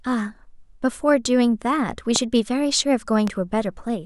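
A loud pop at 2.16 s and another at 3.28 s, likely voltage spikes from a switch or static, show as thin tall spikes on the waveform and vertical broadband lines on a spectrogram, the first well above the speech.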